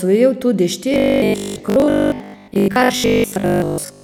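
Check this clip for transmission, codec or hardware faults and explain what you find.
One fault runs from 0.94 s to the end: robotic sound from repeated short buffers. Audio likely arrived too seldom, so a 20 ms chunk was looped in place of most of the real signal. That forces a rigid 50 Hz buzz, making the speech metallic while it roughly follows its shape.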